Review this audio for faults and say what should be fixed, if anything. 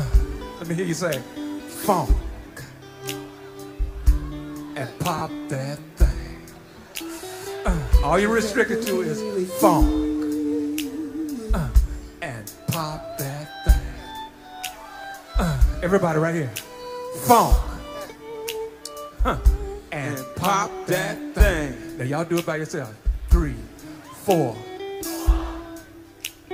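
Lost LE Audio frames at 5.18 to 5.21 s: for about 30 ms the sound becomes a noisy smear, which fits roughly four LC3 frames of 7.5 ms each. The Bluetooth LE Audio link dropped those frames, and the LC3 decoder concealed the gap by repeating the last received spectrum with randomised signs, fading it after the first few frames, until real frames resumed. To prevent it, improve the radio link margin and add retransmission headroom.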